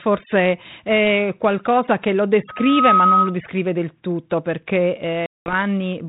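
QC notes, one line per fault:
2.48–3.37 s, loudspeaker feedback squeal: the microphone picked up its own loudspeaker, and the loop gain rose above one at 1.3 kHz. Right after "è qualcosa che lo", a pure tone swells over roughly 0.4 s to about 5 dB above the speech, then cuts out before "del tutto perché".
5.26–5.54 s, packet loss on an ADPCM call: about 200 ms of packets went missing, pointing to roughly ten packets, and were replaced by silence. After "del tutto perché" there is a hard-edged hole. The 32 kbit/s G.726 decoder's predictor and step size then lag the sender's, so speech resumes with brief distortion.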